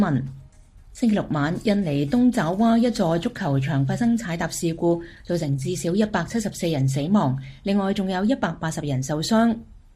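No audible faults are present anywhere in the recording.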